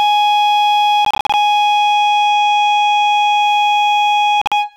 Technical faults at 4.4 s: Bluetooth dropout

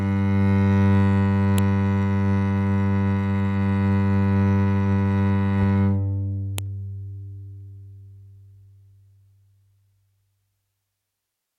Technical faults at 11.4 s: none

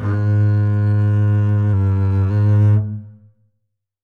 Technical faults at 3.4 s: none

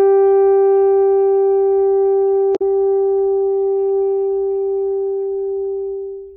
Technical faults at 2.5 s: damaged data in a compressed stream

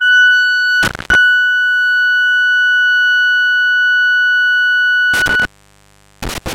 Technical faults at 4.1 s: none

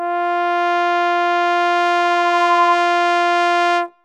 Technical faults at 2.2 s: loudspeaker feedback squeal

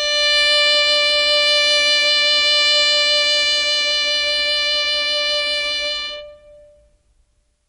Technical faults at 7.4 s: MP3 compression

